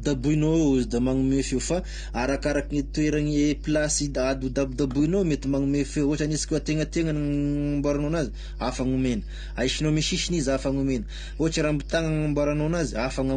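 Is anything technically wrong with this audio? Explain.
Yes, there are two faults, both running through the whole clip.

Mains hum, throughout: a ground loop or nearby transformer leaks the 50 Hz power line into the signal, giving a steady low drone fairly close in level to the speech.

AAC compression, throughout: the speech sounds dull and smeared, with a warbling texture and nothing above 9.6 kHz, likely from AAC-LC coding at a low bitrate around 32 kbps.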